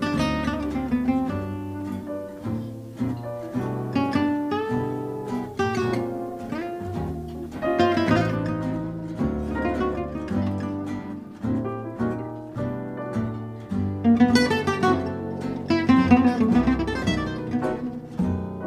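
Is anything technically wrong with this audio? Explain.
Yes. From 0.0 to 8.36 s, grainy distortion tracks the sound, around 35 dB below it, likely from low bit depth without dither, roughly 9-bit rounding.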